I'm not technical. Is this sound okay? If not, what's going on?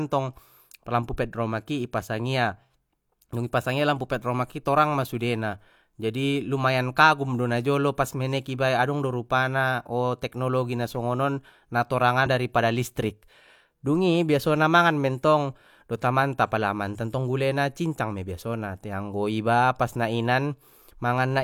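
No. At about 12.22 to 12.27 s, the speech briefly jumps ahead, with roughly a tenth of a second of audio missing. That's compressed frames skipped: a few chunks of the compressed file weren't played.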